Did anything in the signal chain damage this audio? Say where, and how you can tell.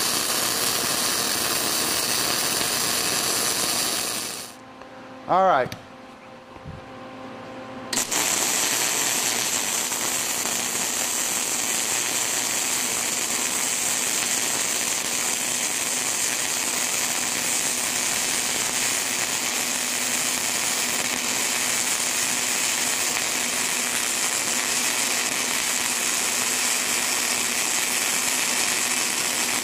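Yes, at the driver or buffer stage: buffer tearing from 17.81 to 18.91 s. A rattling buzz at 93.8 Hz, which fits a 512-sample buffer, shows that each period splices in a small slice of audio about 40 ms old between hard joins. Unlike mains hum, it vanishes whenever the signal does.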